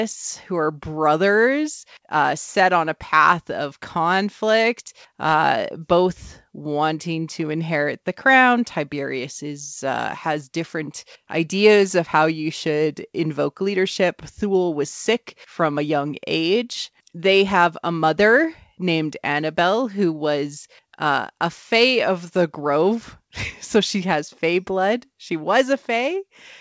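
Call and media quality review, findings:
No findings for call and media quality on this speech clip; it went through the G.722 call path as expected, with nothing above 8 kHz.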